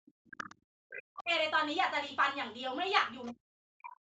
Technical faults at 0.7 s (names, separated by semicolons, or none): speech suppressed in double talk